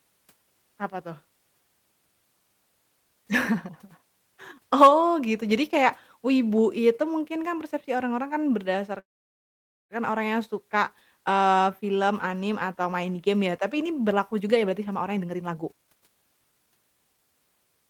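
At 8.99 s the speech halts for about 0.9 s, until 9.93 s. The last sound is carried on only briefly before almost the whole pause, about 0.88 s, goes silent. Then the talk resumes exactly where it broke off. This is a call audio freeze, likely from packets held up in transit so the jitter buffer ran dry. Unlike a dropout, nothing is lost: the speech is simply pushed about 0.9 s later.

From 14.09 s to 17.14 s, straight after "ya tapi ini", there is a jitter buffer speed-up. The speech runs at about 130 % of normal pace and sounds hurried, while the pitch stays where it was. The receiver, holding more audio than it wanted, cut out many short pitch-period slices in a row, trimming roughly a second in total. Steady pitch is what separates this from a plain playback-rate change, which would raise it.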